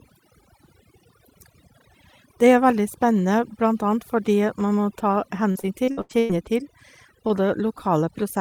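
From the start, overdone noise removal pulls individual frequency bands down whenever they sit near the noise estimate. Quiet parts of the speech vanish with the background, leaving near silence with twinkling specks throughout.

From 5.51 to 6.47 s, repeated packet loss produces a choppy stretch. Six gaps, the longest 100 ms, are patched by extending the preceding sound, so about a third of that span is concealed and the remaining pieces sound broken.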